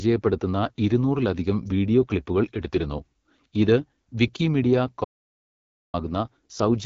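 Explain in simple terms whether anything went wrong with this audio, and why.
Yes, two things went wrong here. The whole clip has been through the AMR wideband (HD Voice) codec, the phone-network coder, at one of its low settings. It rebuilds speech from a simple model of the vocal tract instead of keeping the real waveform, so the speech comes out rough and raspy. Nothing is left above about 7.5 kHz, so the top end sounds dull.

Then there's an audio dropout to silence from 5.05 s to 5.94 s. The sound cuts off mid-flow and comes back just under a second later. The gap is dead silent, with no background hum or room sound at all, so the recorder was writing silence. Most likely the input was briefly lost, say a loose connection or a link hiccup, and whatever was said in that stretch is simply gone.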